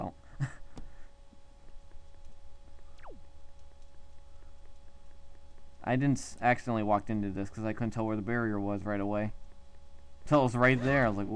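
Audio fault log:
No technical fault can be heard anywhere in the audio; the signal holds steady with nothing that calls for correction.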